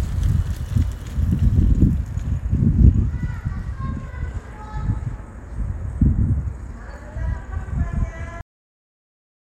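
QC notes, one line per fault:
8.41 s to 9.49 s, cut-off end: the sound stops abruptly mid-event at 8.41 s and falls straight to digital silence with no natural decay, because the final buffers were never written or played, leaving about 1.1 s of dead air.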